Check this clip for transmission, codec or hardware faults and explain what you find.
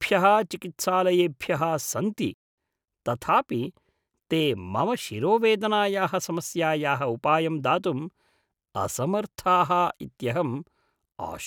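One fault is present. At 2.34 s, just after "चिकित्सालयेभ्यः सन्ति", a playback stall silences the speech for 0.24 s, likely because the player starved of data, leaving a flat waveform and blank spectrogram gap.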